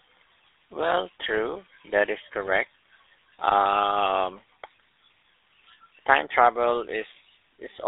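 Speech clip carrying GSM full-rate codec damage throughout: the voice is confined to roughly 300 Hz to 3.7 kHz and has a plainly audible buzzy, gravelly roughness from pulse-based excitation driving a vocal-tract model, which fits a 13 kbps GSM full-rate encode.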